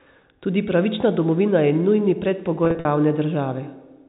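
From 2.65 to 2.85 s, after "pravična domovina je nujni", packet loss with pitch repetition: gaps up to 50 ms are bridged by repeated pitch periods, giving a brief buzzy, held quality.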